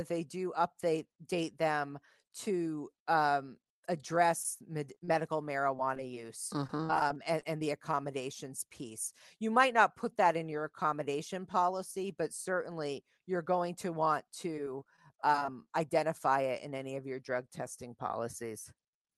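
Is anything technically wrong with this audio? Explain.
Yes. Repeated packet loss (robotic sound) occurs in four stretches: 4.42 to 5.09 s, 5.77 to 6.17 s, 6.67 to 7.62 s (ending just before "the accommodations piece"), and 14.57 to 15.67 s (between "you're going to want" and "identify it in any"). Packets kept arriving lost or late, and each hole of up to about 30 ms was patched by extending the preceding sound. With 4 to 13 such gaps per stretch and roughly 11 to 15 percent of each span concealed, the speech turns choppy, with fragments dropped. The Opus call path underneath cuts off the high frequencies near 12 kHz.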